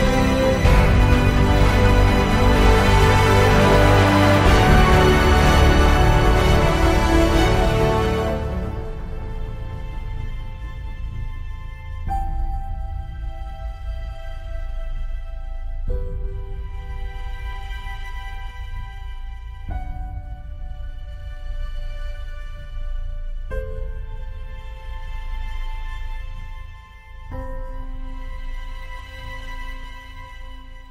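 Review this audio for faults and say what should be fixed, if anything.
Nothing stood out on listening, so there is nothing here that needs fixing.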